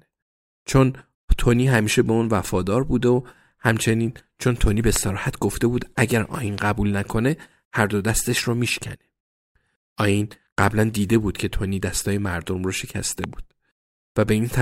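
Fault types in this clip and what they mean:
Loud pop: at 4.96–4.98, 6.58–6.60 and 13.24–13.26 s, single sharp pops about 10 to 15 dB above the speech, likely sudden voltage pulses added to the signal.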